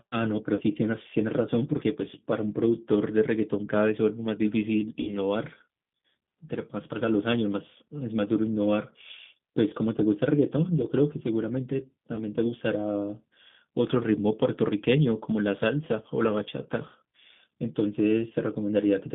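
The whole recording passes through a G.729 codec, and its sound points to the 8 kbit/s G.729A variant. The codec discards the original waveform and rebuilds the speech from a vocal tract filter, a pitch predictor and a handful of pulses per frame. The result is band-limited to roughly 150 Hz to 3.6 kHz and has a plainly audible rough, slightly synthetic grain.

VoIP packet loss concealed by the speech codec occurs three times. From 0.55 to 0.63 s, about 40 ms of audio is missing, which fits two lost packets. From 5.01 to 5.19 s, about 60 ms is missing, consistent with three packets. From 12.15 to 12.22 s, about 20 ms is missing, likely a single packet. Each time, the decoder extends its last pitch and filter at falling gain, so the sound smears into a fading buzzy tone or coloured noise and stays weak briefly after the packets resume.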